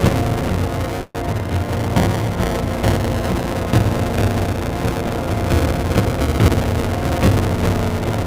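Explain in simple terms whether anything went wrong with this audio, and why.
Two things went wrong. Throughout, there's buffer tearing: a steady robotic buzz around 200 Hz, because part of each buffer replays slightly older sound. From 1.01 to 1.16 s there's a call audio freeze, likely from late packets: the sound stretches into a fading buzz, goes briefly silent, then resumes where it left off, with nothing lost.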